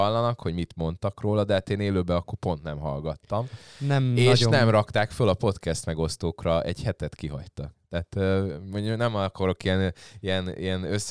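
No technical faults can be heard anywhere in the speech recording, and the signal holds steady throughout.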